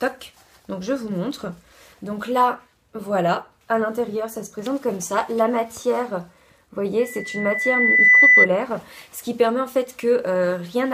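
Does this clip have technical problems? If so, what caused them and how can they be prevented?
Yes. A 2 kHz loudspeaker feedback squeal swells over about a second from 6.99 s to 8.48 s, ending roughly 10 dB above the sound, because microphone and speaker formed a runaway loop. Moving the microphone away from the speaker, lowering gain, or notching 2 kHz prevents it.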